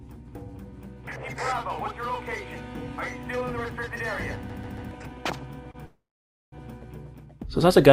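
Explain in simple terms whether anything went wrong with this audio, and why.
A CD stuck on one turn shows up from 4.50 to 4.91 s. The same short piece of sound, about 0.14 s long, plays three times in a row, each time cut off by a tiny mute. That even, rapid stutter is what a skipping disc does: a scratch knocks the laser back one track at the same point on each rotation, so it keeps rereading the same spot.

A short stall from a late packet follows at 5.71 to 5.77 s. One piece of data arrived late, so the player had nothing new to play and held the last sound for about 28 ms until it came. Nothing is lost. The sound just lingers a little too long, with a faint buzz or dip, then carries on from exactly where it paused.

A call audio freeze runs from 5.86 to 6.55 s, a gap of about 0.66 s. The last sound is briefly held, then it fades into silence for roughly half a second before the audio resumes right where it stopped. 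The likely cause is data held up on its way across the network, which left the receiver with nothing to play, so a pause was inserted rather than anything being cut out.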